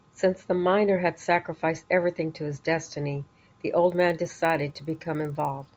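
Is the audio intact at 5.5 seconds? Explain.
No. From 3.85 s to the end of the clip, the resampler is restarted on every block. Each 50 ms block is converted from 16 kHz to 48 kHz without its neighbours' samples, so every edge carries an error, heard as ticks at 20 Hz, present only under the speech.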